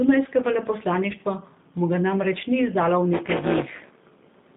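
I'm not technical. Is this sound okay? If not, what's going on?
No. Two things are wrong.

The whole clip has passed through the G.729 codec, a squeezed format used for internet phone calls. It rebuilds speech from a simple model of the voice rather than keeping the real sound. Only a narrow band gets through, from about 150 Hz to 3.7 kHz. The speech sounds thin, like a phone line. It is also clearly rough and a little synthetic.

From 3.13 s to the end there is buffer tearing. The program feeding sound to the playback hardware has fallen out of step with it. In each short chunk, about a fifth of the audio is stale, roughly 15 ms old. The joins are abrupt. This makes a harsh robotic buzz that repeats about 200 times a second, which fits a chunk about 5 ms long. The buzz sits on the speech and is heard only while sound is playing.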